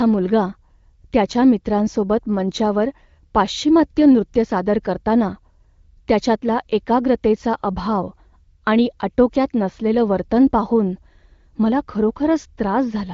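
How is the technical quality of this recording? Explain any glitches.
No glitches can be heard in this speech recording, which carries the band-limited sound of an AMR wideband (HD Voice) codec, with nothing above about 7.4 kHz and only light coding effects that fit a 15.85 kbit/s rate.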